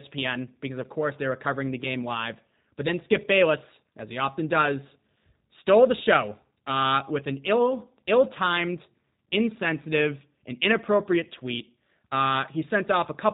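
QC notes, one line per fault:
Throughout, G.729 codec: the speech sounds thin and telephone-like, with a rough, synthetic edge that is plainly audible. Everything above about 4 kHz is gone, so sibilants lose their hiss. The character points to G.729A at around 8 kbit/s, which rebuilds each 10 ms frame from a vocal tract filter, a pitch predictor and a handful of pulses instead of the real waveform, leaving that coarse, artificial texture.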